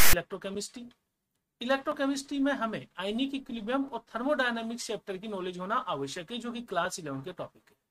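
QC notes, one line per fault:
0.00–0.13 s, file tags played as audio: a hard-edged burst of loud rasp offset to one side, where a block of text tags was read as samples.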